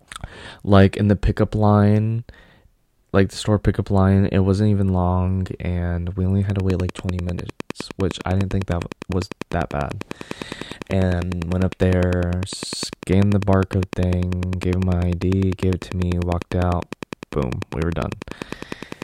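Likely interference, or a faulty connection or power supply, injects a regular pulse from 6.5 s, just after "long and we only": a train of clicks, ten per second, roughly 10 dB above the speech, ticking on through pauses until the end.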